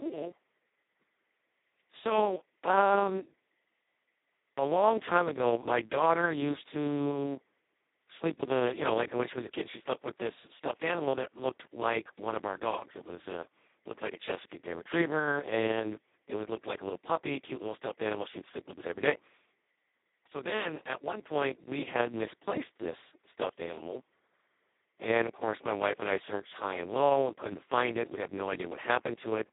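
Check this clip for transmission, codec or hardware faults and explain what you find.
The whole clip carries a Speex codec fault. Its hoarse, robotic CELP texture, which fits a bitrate near 2 kbps, sets it apart from plain 200 Hz to 3.7 kHz band-limiting, with nothing above 3.8 kHz.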